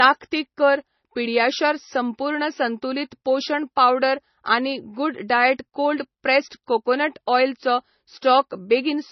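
Speech that sounds dull and muffled throughout, with nothing above 5.9 kHz and the smeared texture of heavy MP3 coding. This is likely low-bitrate audio saved at a high bitrate: a very low-rate MP3 re-encoded generously, which preserves the original cut-off and artefacts.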